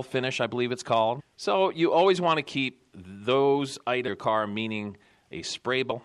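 Damaged data in a compressed stream at 1.19–1.21 s, just after "I believe it's", then at 4.07–4.09 s and 5.90–5.92 s: corrupted frames break decoder sync, each giving a brief glitch.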